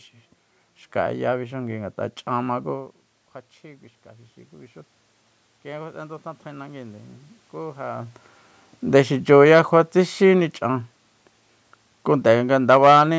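From 5.62 to 8.19 s there is automatic gain rising. After the input level fell by about 16 dB, the gain control slowly lifted its gain by about 4 dB, so the voice and the room noise swell together. A talker moving changes only the voice.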